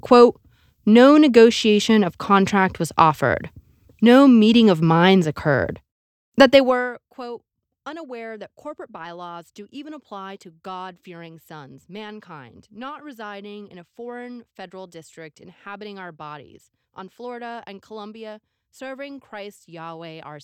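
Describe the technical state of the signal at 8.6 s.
At 8.6 s the signal is intact, with no audible fault at that moment.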